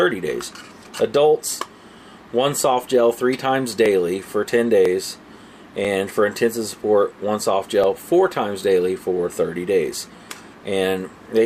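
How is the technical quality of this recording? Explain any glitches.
The recording has small skips: brief jumps at 3.86, 4.85, 5.85 and 7.84 s, spaced one or two seconds apart. This is overlap between stream segments. Neighbouring one-second segments claim overlapping time, so the player trims a few milliseconds of real sound, and the waveform jumps at each boundary.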